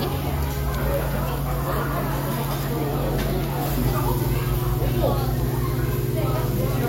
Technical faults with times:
none

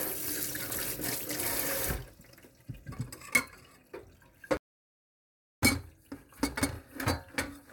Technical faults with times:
4.57-5.62 playback stall

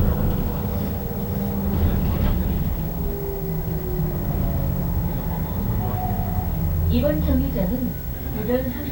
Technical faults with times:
0.00-8.91 video or display buzz

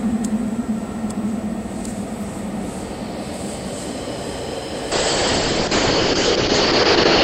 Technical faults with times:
4.93-7.24 call bitrate drop

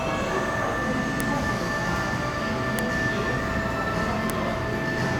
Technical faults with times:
1.20 file header played as audio
2.79 file header played as audio
4.30 file header played as audio

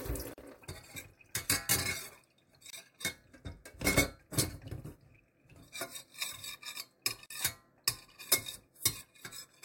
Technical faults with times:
0.33-0.38 gap at a join of encoded pieces
2.70-2.73 gap at a join of encoded pieces
7.26-7.30 gap at a join of encoded pieces

